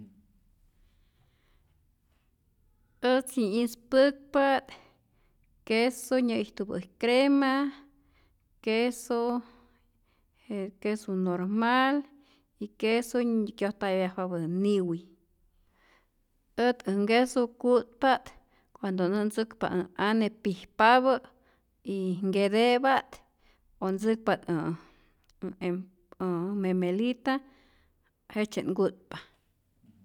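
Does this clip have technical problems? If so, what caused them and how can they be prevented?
No, nothing in this speech recording stands out as a technical problem, so there's nothing here that needs preventing.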